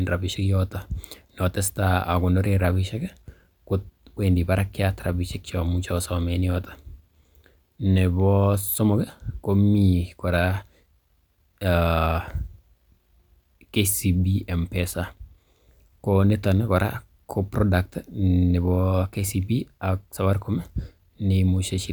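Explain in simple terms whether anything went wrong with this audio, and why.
Nothing went wrong on the technical side: the speech recording shows no audible faults anywhere in the signal, so there is nothing here that needs explaining.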